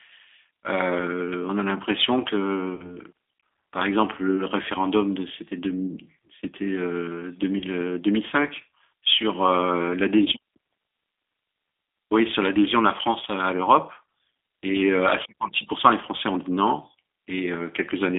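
Speech running through what sounds like a G.729 codec at 8 kbit/s the whole way: the band's squeezed to roughly 300 Hz to 3.6 kHz, and the pulse-built excitation gives it that plainly rough, slightly synthetic edge. On top of that there's VoIP packet loss concealed by the speech codec at 2.75–2.97 s, 7.59–7.65 s and 10.24–10.28 s. The decoder papers over gaps of about 40 ms and 20 ms, 20 ms by stretching the last pitch and filter into a fading buzzy tone or coloured noise, and the sound stays smeared a bit after each gap.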